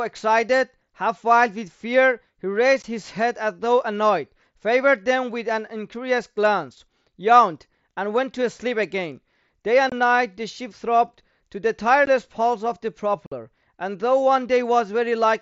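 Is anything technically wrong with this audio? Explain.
Yes. The speech has unconcealed Bluetooth headset packet loss at 2.82 s, 9.90–9.92 s, 12.06 s and 13.26–13.32 s, with gaps of about 15, 22.5, 15 and 52.5 ms. Packets between headset and phone went missing, and nothing was synthesized to replace them. Each gap is a hard silent hole with an abrupt edge, unlike concealed loss, which smears or repeats sound across the gap. The wideband mSBC link's band up to 8 kHz can be heard around the holes.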